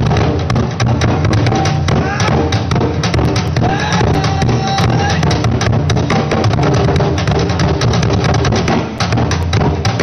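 Two bursts of small, evenly spaced ticks, about five a second, interrupt the sound from 3.25 to 5.03 s and again from 8.54 to 9.43 s. Each is a tiny click or momentary gap of a few milliseconds. These are CD scratch ticks. A blemish on the disc wipes out more data than error correction can restore on each rotation, so the player interpolates or mutes those samples, and the damage recurs at the disc's turning rate.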